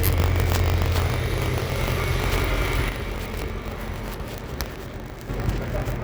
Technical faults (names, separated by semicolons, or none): buffer tearing; one channel drops out